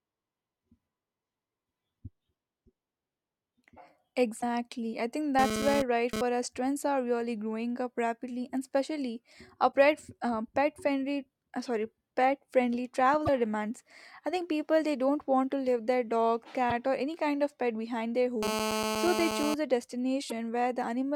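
Corrupted bytes in the compressed speech stream cause five brief decoding faults, each about 50 ms long: 4.38–4.43 s, 9.69–9.73 s, 13.24–13.29 s, 16.67–16.72 s and 20.27–20.32 s. At each point the decoder hits damaged data in a compressed stream, misreads or rejects the affected frames and loses sync until it finds the next valid frame header. The result is a short chirp or squawk cutting through the speech. Separately, a nearby 2G handset's radio bursts are being rectified by the audio circuitry, producing GSM phone buzz: a hard, raspy tone at 217 Hz with a dense stack of harmonics, unrelated to the speech and only about 2 dB below it. From 5.39 to 6.21 s the phone is transferring data, so the buzz stutters on and off. From 18.43 to 19.54 s it is on a call, and the buzz holds nearly steady.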